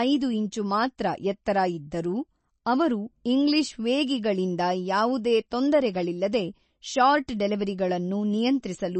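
From start to finish the speech carries plainly audible damage, likely from MP3 compression at a low bitrate, which fits a rate around 32 kbps. With so few bits, the encoder removes everything above 8.3 kHz and drops weaker frequency lines that flicker on and off between frames. The result sounds watery and swirly, with metallic chirps on s sounds and smeared attacks. A spectrogram shows a hard ceiling at 8.3 kHz and scattered, blinking holes beneath it.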